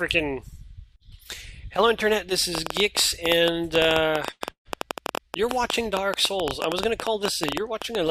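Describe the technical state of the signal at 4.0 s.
At 4.0 s the signal carries a train of clicks, running from 2.55 s to 8.10 s. The likely cause is something such as interference from nearby equipment or a faulty connection or power supply, injecting short pulses of much the same shape about 10 times a second at an uneven pace. Peaking about 15 dB above the signal, they sit clearly on top of it as an irregular ticking or popping.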